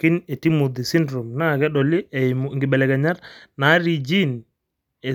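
Nothing to flag: the speech recording carries no audible technical faults at any point.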